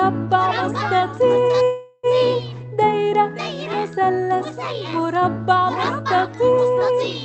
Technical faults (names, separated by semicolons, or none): call audio freeze